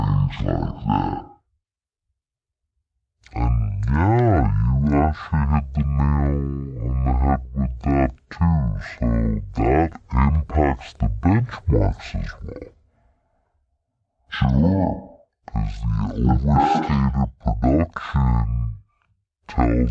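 Speech throughout the clip has a wrong sample rate fault. It runs at half speed and sits a full octave, about 12 semitones, below where it should. Because speed and pitch drop together by the same factor of 0.5, the samples are being clocked out at roughly half the rate they were captured at, with no resampling in between. That fits 44.1 kHz material played back at about 22 kHz, which makes the voice sound low, slow and drawn out.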